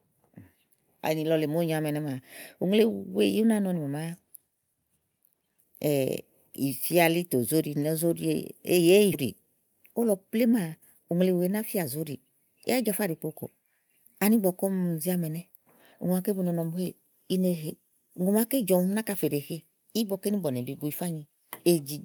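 Speech, with a sudden jump forward at 9.13 s where about 0.4 s of audio vanishes and the two sides butt together with no gap. This is a skip ahead: a stretch of audio was dropped while later audio was already waiting, so playback leapt past it. Right after, from 9.25 s to 11.16 s, the speech sounds hurried while keeping its pitch, running at about 108 percent speed. That is a jitter buffer speed-up: the buffer held more delay than its target, so the receiver repeatedly cut out tiny pitch-period slices, removing roughly 150 ms in total to catch up.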